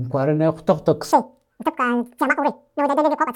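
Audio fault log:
1.12–3.35 s, section at the wrong speed: from 1.12 s to the end, the speech plays at twice its recorded rate, so timing is halved and pitch jumps at once, by around ten semitones, giving a hurried, chipmunk-like quality. Because speed and pitch move together with no gradual transition, this points to a playback or edit stage that likely ran this segment against the wrong clock rather than resampling it correctly.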